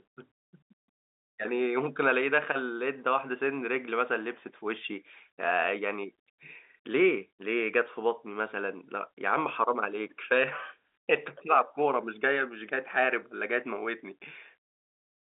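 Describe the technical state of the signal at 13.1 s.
At 13.1 s the speech is intact, with no fault present beyond the ordinary narrow telephone band of G.711 coding, which carries roughly 250 Hz to 3.6 kHz and nothing above 3.8 kHz.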